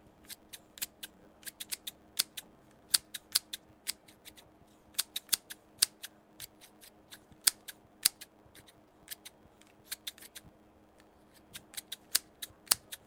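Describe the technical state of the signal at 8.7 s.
At 8.7 s, as throughout the clip, there is a block size mismatch (truncated). Each 512-sample block loses its tail before the next stage reads it. A 100 Hz buzz results. The sound runs 1.16 times fast with its timbre kept.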